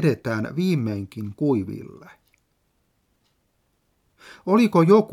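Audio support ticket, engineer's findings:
No audible technical fault found in the signal; no dropouts, distortion, timing or level anomalies identified on listening.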